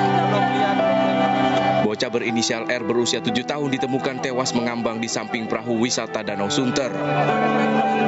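From start to finish the level breathes: each loud sound pushes the background down, and in the pauses the background rises back up by something like 15 dB. This gain pumping is likely caused by the input gain set far too high, with a fast limiter dragging it down on every peak. Unlike a noise gate, which cuts the background off sharply, here the background swells smoothly back, while the squashed peaks sit over a top end that stops at 8 kHz.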